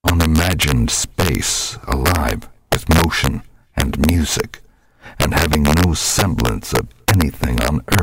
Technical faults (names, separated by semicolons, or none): integer overflow